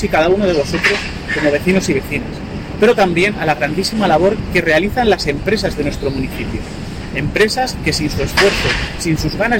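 Hard clipping runs through the whole clip. The signal is driven about 10 dB past what the stage could pass, so every peak is sliced flat at the ceiling. Only a small share of samples, around one or two percent, hit that limit. It is heard as gritty crackle on the loudest moments. On a waveform the peaks show as squared-off plateaus. A spectrogram shows broadband harmonic smears reaching high into the kHz range at each clipped peak.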